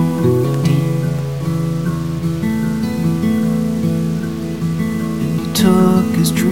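A stuck bit, likely one data line held fixed, offsets about half the samples by a step near -35 dBFS throughout, giving the music harsh, buzzy distortion.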